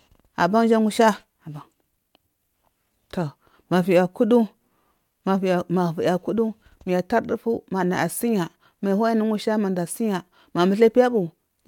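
No technical faults are audible.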